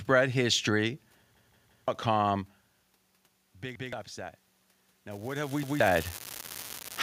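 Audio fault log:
1.37–1.88 s, 3.76–3.93 s and 5.63–5.80 s, repeated buffer: new audio failed to reach the device in time, so it replayed its last block of about 171 ms, which fits an 8192-sample buffer. The first spot stutters through three extra plays and loses about half a second. The later two repeat once each and drop roughly 150 ms. Every repeat starts at a hard join.
5.11 s to end, unreliable data bit: a marginal data line reads its bit wrongly in a random share of samples, and each error becomes a spike of identical size. This lays a steady crackling fizz over the sound that carries on through the pauses.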